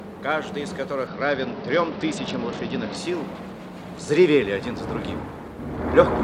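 From 1.07 s to 2.96 s a Bluetooth SBC bit pool drop dulls the treble and adds gritty quantisation noise, consistent with the bit pool falling from 31 to 9 (about 72 kbps). Unlike a plain low-pass filter, grain accompanies the lost top, and quality returns when the rate recovers.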